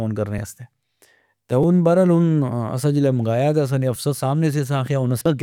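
At 0.38 s, 1.63 s and 3.96 s the speech has a repeated buffer. New audio missed its deadline, so the device played its last block again: once at 0.38 s and 3.96 s, twice at 1.63 s. Each block lasts 5.33 ms, which fits a 256-sample buffer, so the repeats are heard as brief clicks rather than stutters. On the waveform an identical short segment repeats with hard joins, and the spectrogram shows a thin vertical broadband line at each join.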